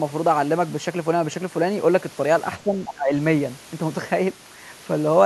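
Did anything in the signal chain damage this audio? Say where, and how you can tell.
Yes. From 2.58 to 3.13 s the speech sinks by roughly 15 dB and thins out in patches. That is speech suppressed in double talk at the call-processing stage, most likely an echo canceller that couldn't separate near talker from far-end echo and attenuated both.

Around 2.85 to 2.93 s a brief, faint second voice, roughly 15 dB below the speech, surfaces underneath. That is the other side's voice leaking through, likely a scrap of loudspeaker echo left in the microphone signal by the same echo canceller.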